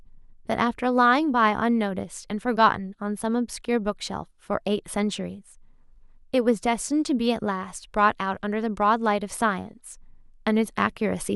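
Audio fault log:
No fault is heard anywhere in this speech recording. There is nothing to log for any point in the clip.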